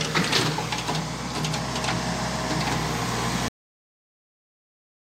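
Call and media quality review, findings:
Cut-off end at 3.48 s. Sound stops abruptly mid-event, no decay, straight to digital silence for the remaining 1.7 s. Probable component: capture or playback buffer handling at stream close. Final buffers apparently never written or flushed before teardown, so trailing audio lost rather than faded.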